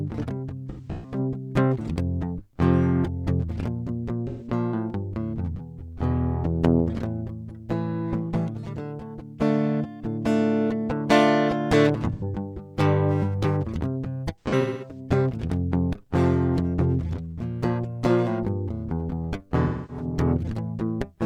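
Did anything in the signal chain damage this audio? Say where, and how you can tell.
Yes. The damage is at the codec and transmission stage: AAC frame loss with concealment. The music smears into noisy, phasey patches at 0.69 to 1.18 s, 4.28 to 4.47 s, 12.13 to 12.23 s, 14.41 to 14.99 s and 19.64 to 20.05 s. The first and fourth are broken up, with runs up to about 150 and 200 ms. Missing frames were rebuilt from the last good spectrum. The gap lengths fit frames of about 43 ms.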